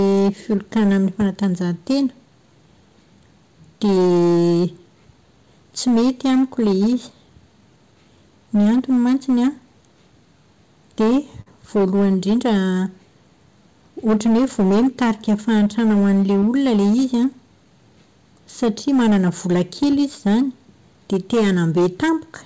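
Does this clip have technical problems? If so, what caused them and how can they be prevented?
Yes. Three kinds of fault can be heard.

Hard clipping runs through the whole recording. A gain stage before the converter or encoder was driven about 10 dB past what it could pass, so around a tenth of the samples hit the ceiling and had their peaks sliced flat. Those squared-off tops add harmonics high up the spectrum. To prevent it, set input gain so peaks sit well below full scale, or use a limiter ahead of any fixed-point stage.

Short concealed packet loss occurs at 0.56 to 0.59 s and again at 16.40 to 16.43 s. Each time, about 20 ms of the stream failed to reach the decoder in time. The receiver extended the preceding sound for roughly 15 ms to cover the hole, then cross-faded back into real audio. The result is a brief smear or wobble, and a short consonant can drop out at that point. 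A larger jitter buffer or in-band forward error correction would prevent these gaps.

A burst of packet loss hits at 11.41 to 11.48 s. Here about 40 ms of consecutive audio went missing. The concealment stretched the last sound across roughly 47 ms while fading it down, producing a held buzz or dying hiss. Playback then jumps ahead, and the speech that fell in the gap is simply gone. Redundant packet coding combined with a more robust network route or adaptive jitter buffering would reduce such bursts.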